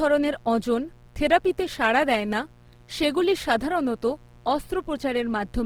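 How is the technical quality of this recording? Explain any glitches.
Technical quality is poor, with two faults running through the whole speech recording.

A mains buzz, with harmonics of 60 Hz reaching into the kilohertz range, sits about 30 dB below the speech throughout. Switching spikes twice per mains cycle give it a steady, raspy edge.

The speech sounds rough and grainy across the full band up to about 20.3 kHz. This is likely Opus compression in its music mode at a bitrate around 16 kbps, filling starved bands with folded or noisy content.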